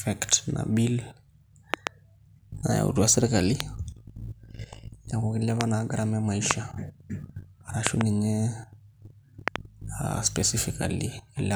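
Loud pops at 1.74–1.89 s (a double), 3.60–3.62 s after "nayautua sirkali", 5.61–5.63 s between "neeku kilepa" and "naa garama e", 6.51–6.53 s after "kilepa naa garama e", and doubles at 7.87–8.03 s and 9.48–9.58 s. These are sharp thumps about 25 dB above the speech (the last about 20 dB) while the talking continues underneath, likely from sudden voltage spikes such as switching or static discharge.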